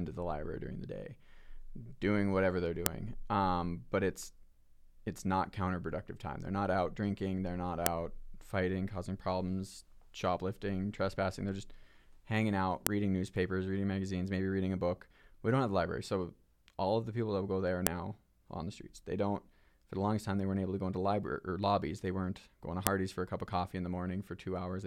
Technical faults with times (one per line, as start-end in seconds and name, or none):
2.86 file header played as audio
7.86 file header played as audio
12.87 file header played as audio
17.87 file header played as audio
22.87 file header played as audio